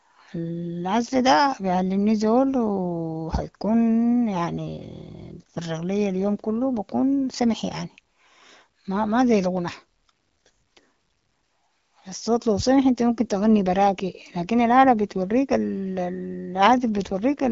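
No technical faults are audible.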